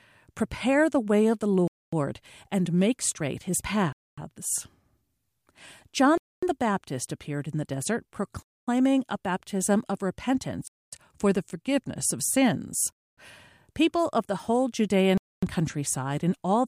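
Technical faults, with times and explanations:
1.68–1.93, 3.93–4.18, 6.18–6.43, 8.43–8.68, 10.68–10.93, 12.93–13.18 and 15.18–15.43 s, gap between chunks: the speech halts abruptly for 250 ms and resumes, first after "the way of the" before "and make straight his", later just before "for the forgiveness of". The holes recur every 2.25 s, which points to 2-second chunks each followed by inserted silence. Nothing is lost, but the speech is pushed later at every join.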